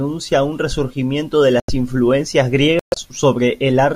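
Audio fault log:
1.60 to 1.70 s, corrupt frame muted: right after "un resurgimiento de" the speech drops abruptly into a 0.1 s hole, which fits a few damaged frames rejected by the decoder and replaced with silence.
2.79 to 2.98 s, corrupt frame muted: same thing again, a longer 0.19 s gap starting sharply, consistent with several bad frames muted. Timing carries on unshifted afterwards.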